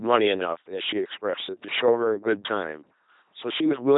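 Throughout, heavy LPC-10 vocoder damage, fitting 2.4 kbit/s, renders the speech as a buzzing pulse-driven robot; the spectrogram shows rigid striping, empty above 3.8 kHz.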